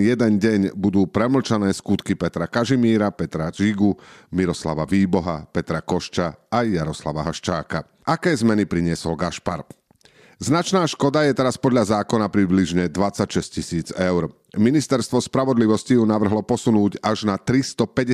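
No dropouts, clipping, distortion, noise bursts or timing errors turn up anywhere in this speech recording.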